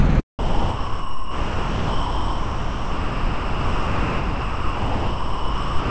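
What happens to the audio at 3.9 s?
At 3.9 s the original sound is gone, replaced by steady comfort noise. This is sound dropped by the voice detector, running from 0.39 s to the end of the clip. The sender's detector likely mistook the sound for background and stopped transmitting, so the receiver filled the gap with synthetic noise. On a waveform this shows as a flat, low, even band. On a spectrogram it appears as a uniform, featureless wash capped at 8 kHz by the call codec.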